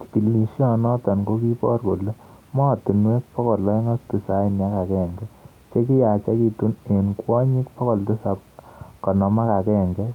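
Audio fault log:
No faults heard anywhere in this speech recording.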